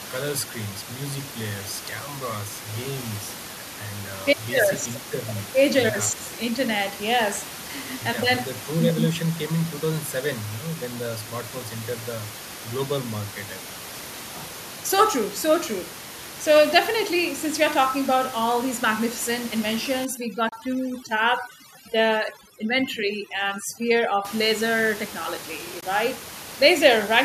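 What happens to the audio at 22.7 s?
At 22.7 s the speech is caught in overdone noise removal, running from 20.05 to 24.25 s. A noise reduction stage set too aggressively is pulling frequency bands down or out wherever they sit close to its noise estimate, so the room noise drops and breaks up into twinkling specks.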